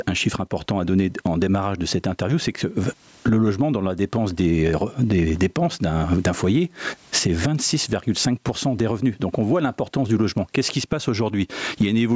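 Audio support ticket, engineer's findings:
Gain pumping, whole clip. Gain swing of about 15 dB; loud and soft parts pushed together, squashed. Likely cause: mic gain far too high, fast limiter/compressor clamping every peak. Call mic processing band-limited to 8 kHz, as expected.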